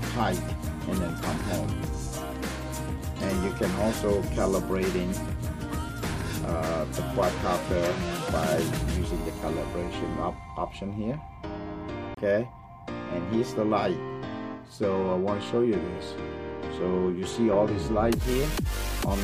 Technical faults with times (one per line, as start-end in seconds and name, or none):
12.14-12.17 CD skip